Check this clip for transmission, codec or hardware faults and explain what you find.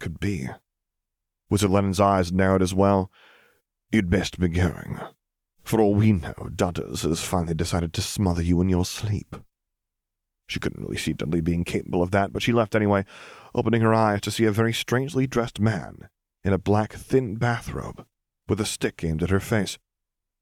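One fault appears near the end: crude rate conversion runs from 16.34 s, just after "very strangely dressed man", to the end of the speech. The samples seem to have been resampled by simple linear interpolation with no anti-alias filter, in a way that fits a 44.1 kHz to 48 kHz change. The interpolation error repeats with the ratio of the two rates and folds high content into tones unrelated to the speech. These tones sit roughly 35 dB below the signal and are heard as a gritty, inharmonic fizz that rides on loud and sibilant moments. On a spectrogram, faint mirrored lines appear that move opposite to the real harmonics.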